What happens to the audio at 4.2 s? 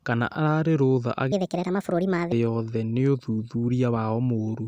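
Nothing goes wrong at 4.2 s: the speech carries on intact through that moment, with no dropout, click or distortion to be heard.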